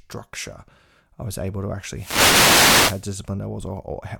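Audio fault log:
1.93–3.08 s, wireless microphone noise hit: just after "I was able to", a swish of static rises over speech for 1.2 s as the radio signal fades and receiver noise rises. Unlike a digital dropout, the sound is buried in hiss instead of cutting to silence.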